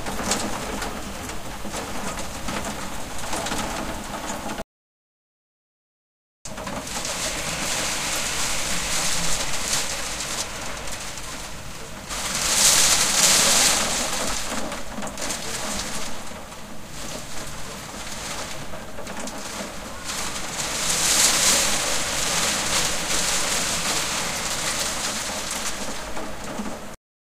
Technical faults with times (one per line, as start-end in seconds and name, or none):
4.62-6.45 audio dropout to silence
26.95-27.27 cut-off end